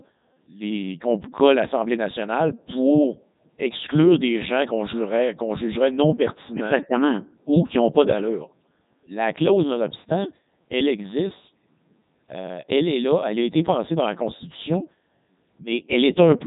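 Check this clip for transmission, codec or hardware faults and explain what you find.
One fault runs through the whole clip: the speech has passed through a Codec 2 vocoder. From start to end, it sounds like Codec 2 at its top 3.2 kbit/s mode. Only pitch, voicing, energy and a spectral envelope survive; the decoder rebuilds the speech from sine waves, so the original waveform is gone. The result is heavily robotic and buzzy, with nothing above 3.8 kHz.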